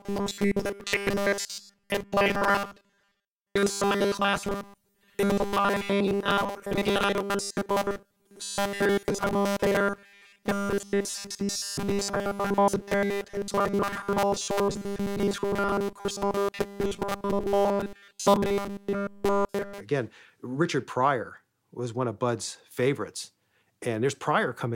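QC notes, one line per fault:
0.01–19.81 s, robotic sound from repeated short buffers: new audio likely arrived too seldom, so playback kept looping the last short stretch, with nearly all of it repeated, while the real speech was skipped. The loop imposes a rigid, metallic 200 Hz buzz, which fits a 5 ms buffer.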